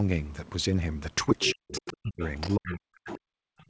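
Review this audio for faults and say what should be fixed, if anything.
Other side's voice leaking through at 1.40–1.53, 1.71–1.93, 2.22–2.75 and 3.08–3.18 s. A second voice comes through, likely from loudspeaker echo the canceller missed. Better echo cancellation or a headset would prevent it.

Speech suppressed in double talk at 1.46–1.72, 1.93–2.22 and 2.56–3.59 s. The main voice dips very deeply while both sides talk. The echo canceller likely cannot separate them. Better double-talk detection would prevent it.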